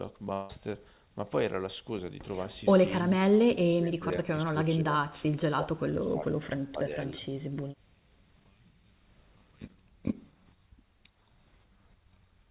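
At 0.33 s the speech breaks off for about 0.17 s, to 0.50 s, in what is likely a long network dropout. Packets stopped arriving, and the receiver filled almost the whole gap by stretching the last sound into a fading buzzy hiss rather than leaving silence. When the speech resumes, that stretch is simply missing. On a spectrogram the harmonics smear into a blurred, decaying band, and the waveform shows the envelope sagging before the return.

From 3.46 s to 7.25 s the voice is repeatedly pushed down, most likely by speech suppressed in double talk, where an echo canceller mistook the talker for loudspeaker echo while the far side was also speaking. The dips fall at 3.46–4.26 s (deepest, around 30 dB), 4.45–4.56 s (about 15 dB), 4.76–5.36 s (about 25 dB), 5.55–6.53 s (about 20 dB) and 6.70–7.25 s (about 15 dB). They sound like the voice ducking and chopping. The waveform shows ragged level holes, and the spectrogram shows patches fading within the narrowband 4 kHz G.711 picture.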